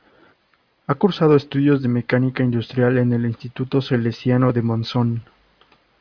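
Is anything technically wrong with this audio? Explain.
No, nothing in this speech recording stood out as technically wrong on listening.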